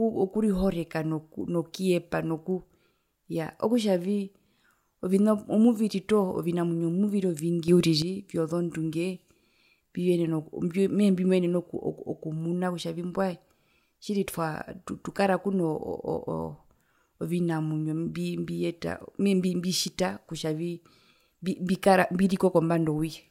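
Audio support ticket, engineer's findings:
Sudden gain jump at 7.68 s in the speech. Level rises about 9 dB in one step, lasting to 8.02 s. Background noise jumps with the voice, no fade. Likely cause: a digital gain setting applied without a ramp, in the capture or processing chain.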